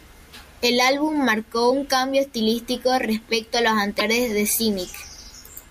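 Damaged data in the compressed stream makes the decoder misread frames and lose sync twice: at 1.67–1.71 s, just before "un cambio estilístico respecto", and at 3.97–4.01 s, after "estilístico respecto a los". Each is heard as a brief chirp or blip in the speech.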